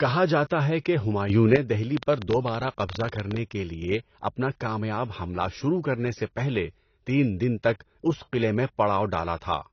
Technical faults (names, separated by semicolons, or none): AAC compression; sudden gain jump